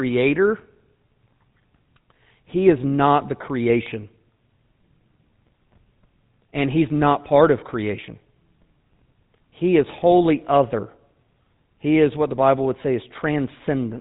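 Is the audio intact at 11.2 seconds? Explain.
No. At 11.2 seconds, as across the entire clip, the speech carries GSM full-rate codec damage, which fits 13 kbps GSM full-rate encoding. The codec models the vocal tract as a filter and excites it with a sparse, regularly spaced pulse train built from every third excitation sample, so the fine structure of the voice is replaced by a coarse approximation. The result is a plainly audible buzzy, gravelly roughness, and nothing above 4 kHz survives, leaving the speech band-limited and dull.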